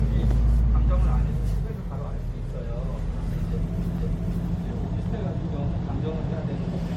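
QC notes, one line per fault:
throughout: generation loss, likely repeated MP3 encoding at 64 kbit/s, about seven passes, stacking quantisation noise; swirly, hollow, smeared sound, blurred attacks, nothing above 16.5 kHz.
3.98 s: CD skip, the laser jumped tracks and the player muted for a few milliseconds, heard as a tick with playback resuming elsewhere.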